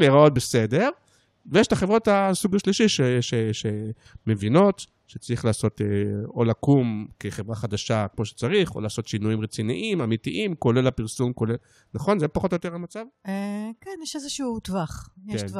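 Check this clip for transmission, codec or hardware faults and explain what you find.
One fault turns up: zipper noise between 12.35 and 12.91 s, as the level of the speech is pulled down by roughly 10 dB. The gain moves in bare 2 dB jumps, around ten a second, with no smoothing between them. Each jump snaps the waveform to a new level and leaves a small click, so a ticking, zipping texture rides on the speech for that half-second.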